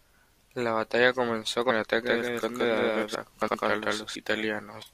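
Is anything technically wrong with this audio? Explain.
Yes, there are three kinds of fault.

Doubled audio track, 2.06 to 4.16 s: a second full-band copy runs roughly 150 ms behind the original at about the same level, likely from a slower second capture path. It sounds like a dry, slapback echo with no room colour, and it starts and stops abruptly.

Compressed frames skipped, at 3.13 s and 4.81 s: whole frames of the compressed stream were never decoded, so the audio jumps ahead by roughly 300 ms and then roughly 200 ms. That fits about ten and about seven 24 ms frames.

Chunks out of order, 3.42 to 3.54 s: one 60 ms chunk arrived or was written late and plays after the chunk that should follow it. Nothing is missing, but the swapped order gives a brief jumbled moment with three hard joins.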